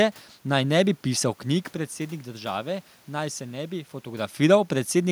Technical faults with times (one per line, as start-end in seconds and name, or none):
none